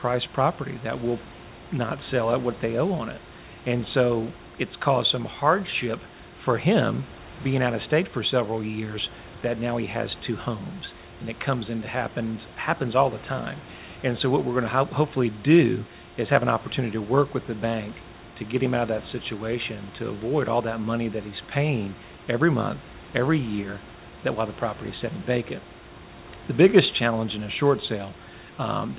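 Nothing here is actually wrong: it's speech carried over a call link using G.711 mu-law at 64 kbps, so there's simply nothing above 4 kHz, and the room's own background noise sits about 23 dB below the talking.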